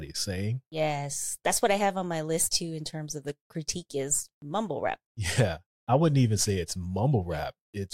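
No technical faults can be heard anywhere in the speech. Nothing here needs a timestamp or an explanation.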